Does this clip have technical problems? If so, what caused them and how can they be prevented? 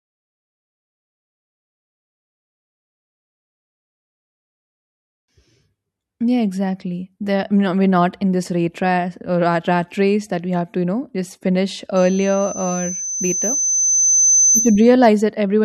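Yes: loudspeaker feedback squeal from 11.96 to 14.94 s, a 6.1 kHz tone swelling over about two seconds to roughly 5 dB above the speech. Mic and speaker formed a runaway loop. Lower gain, or move the mic off-axis.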